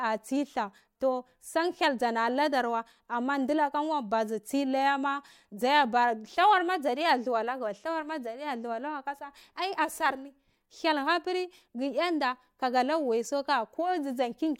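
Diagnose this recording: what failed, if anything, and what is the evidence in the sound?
Nothing failed in this recording, and the sound gives no evidence of a fault at any stage.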